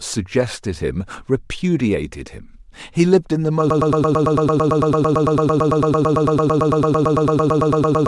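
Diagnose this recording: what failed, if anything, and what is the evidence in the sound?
From 3.70 s to the end, the speech collapses into a broken-record loop: a fragment of about 0.11 s repeats exactly and back to back, around 39 times, and the speech that should follow is gone. The waveform shows one identical short pattern tiled across the last section, and the spectrogram shows a rigid comb of repeated vertical slices. The likely cause is a stalled player or stream buffer that kept resending its last block.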